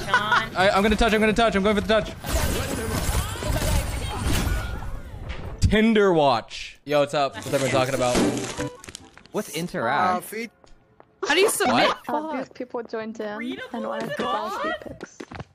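Nothing here calls for a fix, since no technical fault turns up anywhere in the audio.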